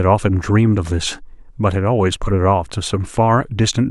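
No technical faults can be heard anywhere in the speech recording.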